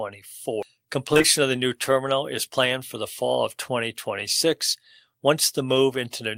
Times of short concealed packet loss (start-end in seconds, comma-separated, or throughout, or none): 1.13-1.26